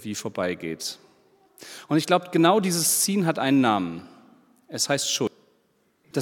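Right near the end, at about 5.27 s, the audio jumps forward, with roughly a third of a second just gone. That's compressed frames skipped: a run of encoded frames either never made it into the file or got rejected by the decoder as damaged, so playback picks up from the next good one, and the sound lurches ahead at the join.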